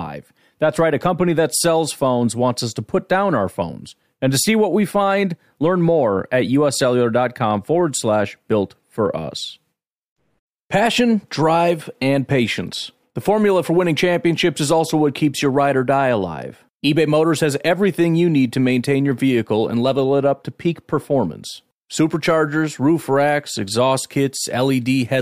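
Nothing in the speech recording points to a technical fault; the signal holds steady and continuous throughout, with no audible dropouts, distortion or interruptions.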